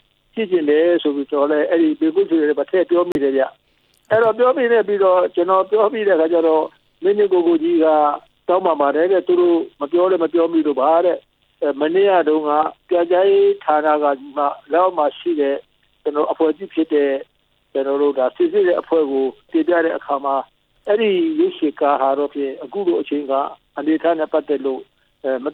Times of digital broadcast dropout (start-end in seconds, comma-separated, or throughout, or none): 3.12-3.15